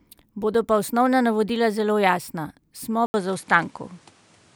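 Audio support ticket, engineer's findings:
Input switched to a poorer device, 3.06 s to end: 80 ms gap, then band capped at 11.4 kHz, new faint noise floor; likely mid-recording input change.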